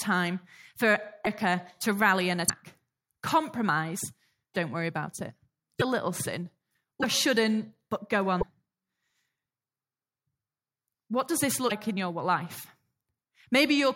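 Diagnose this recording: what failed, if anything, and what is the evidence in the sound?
The speech has seven short glitches, each about 30 ms long, at 1.24, 2.47, 4.53, 5.79, 7.02, 8.40 and 11.69 s. The first comes just before "to rally an", the second just after it, and the sixth follows "shouldn't but go". Each is a jump forward with a brief chirp, noise burst or short hole, likely a broken MP3 bit reservoir at the codec stage. A removed 26.1 ms frame leaves the next frame reading borrowed bytes from the wrong data. Packet-loss concealment would instead smear the sound smoothly across the gap.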